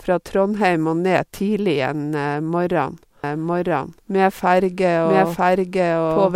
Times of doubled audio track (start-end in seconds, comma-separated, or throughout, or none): 3.24-6.35